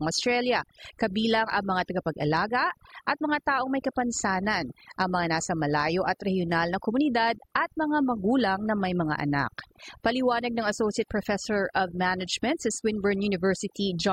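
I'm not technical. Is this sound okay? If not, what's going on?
No, it's been hit with overdone noise removal the whole way through: the quiet background turns into twinkly specks.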